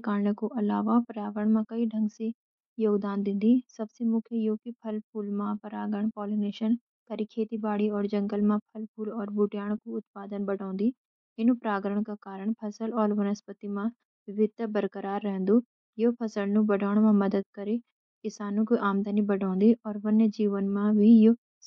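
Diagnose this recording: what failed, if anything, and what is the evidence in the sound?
The speech has a grainy, breathy top end that's plainly audible throughout, so this is a codec-stage problem, likely Bluetooth LC3 compression. The texture fits around 48 kbps with 10 ms frames, where the transform coder drops upper-band detail and fills the gaps with noise.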